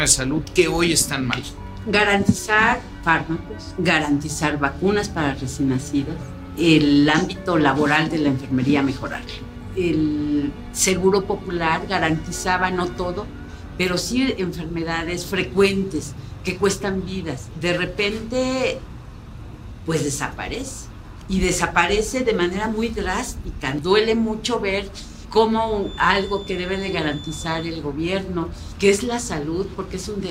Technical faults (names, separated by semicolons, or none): feedback whistle